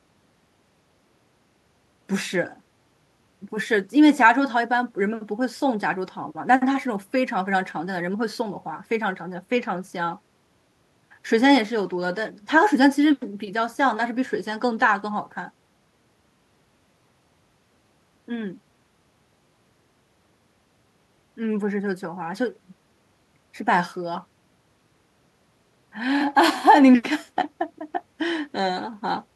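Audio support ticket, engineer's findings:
Listened through the speech recording and nothing jumped out, so there's no fault to log here.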